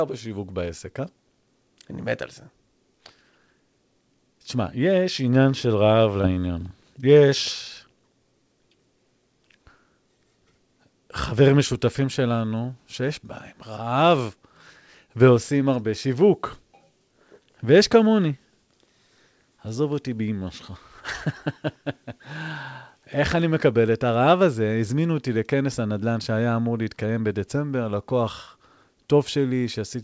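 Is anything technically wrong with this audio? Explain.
Yes. There is short concealed packet loss from 6.22 to 6.26 s. About 20 ms of the call audio arrived too late for the decoder, so the receiver extended the preceding sound to cover the gap, then crossfaded back into the real signal. This leaves a brief smear or wobble in the speech. The audio has also passed through a wideband call codec, so nothing is present above 8 kHz.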